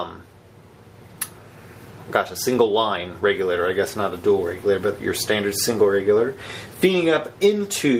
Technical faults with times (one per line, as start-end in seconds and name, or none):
none